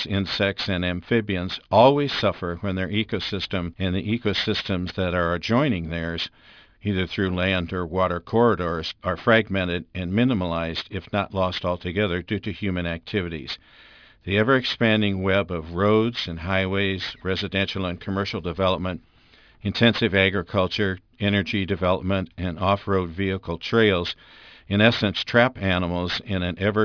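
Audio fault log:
throughout aliasing: gritty, metallic sibilants and a spectrum packed hard up to 5.5 kHz. Higher content folds back about 15 dB down, which fits unfiltered downsampling to 11 kHz.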